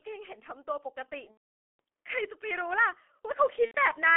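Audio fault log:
throughout, G.723.1 codec: The speech sounds muffled and hoarse, with consonants smeared together and a rough, grainy edge on every syllable. The line passes only about 300 Hz to 3.4 kHz, so all the upper brightness and sibilance is gone. The heavy damage points to the 6.3 kbit/s mode of this early telephony codec, which rebuilds the voice from a coarse model updated only once per 30 ms frame, too slowly to follow fast consonant changes.
1.31–1.79 s and 3.65–3.79 s, VoIP packet loss concealed by the speech codec: At 1.31 s the speech turns into a stretched sound that fades and is muted from the third lost frame, across a gap of about 480 ms, consistent with sixteen consecutive 30 ms frames missing. A shorter smear of about 90 ms follows at 3.65 s. The decoder had no new data, so it kept repeating its last pitch and filter settings while lowering the gain each frame. The result is a stretched imitation of the previous sound that then falls silent.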